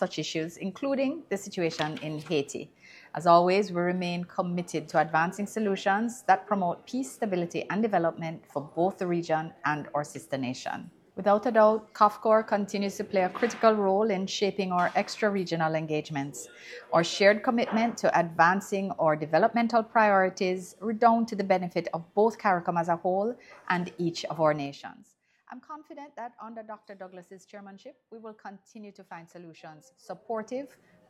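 At 24.49 to 25.09 s the level drops by roughly 15 dB in 2 dB steps, and at 29.78 to 30.81 s it climbs back by a similar amount in 1 dB steps. This is zipper noise: each step is applied abruptly, about ten times a second, so a fine ticking rides on the sound.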